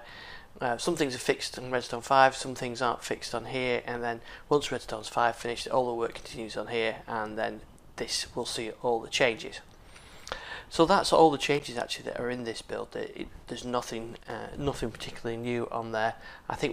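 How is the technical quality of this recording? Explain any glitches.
The recording has two short glitches, both loose connector crackle. A worn or dirty contact kept making and breaking, chopping the signal into an irregular burst of scratchy crackle at 11.36 to 11.73 s and again at 14.09 to 14.32 s.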